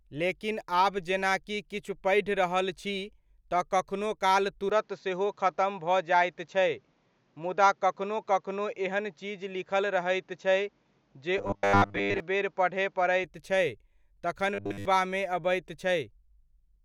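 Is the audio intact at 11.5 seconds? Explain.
No. From 11.38 to 12.20 s the speech has robotic sound from repeated short buffers: a rigid, metallic 100 Hz buzz that only loosely tracks the syllables. The likely cause is a 10 ms stretch of audio replayed over and over to fill late-arriving input, so most of that span is copies rather than new sound. On a waveform the same short shape repeats identically; a spectrogram shows fixed harmonics stacked at 100 Hz intervals.

This sits inside a longer fault, from 4.70 to 13.24 s, starting just after "तऽ कखनो काल": input switched to a poorer device, likely another microphone or a headset profile. The sound turns duller and boxier with no gap at the switch and barely any level change. A spectrogram shows a narrower band across the whole span, plus a faint new noise floor lying far below the signal.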